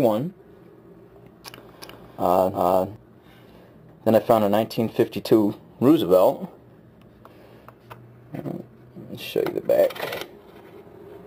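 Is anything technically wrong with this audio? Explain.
Yes. From 1.82 to 2.96 s there is a doubled audio track: a second, full-band copy of the sound runs around 400 ms behind the original at roughly the same level. This likely comes from the signal being captured twice, once through a slower path. Unlike an echo or reverb, the copy has no decay and no room colour, and it cuts in and out abruptly at those edges rather than fading.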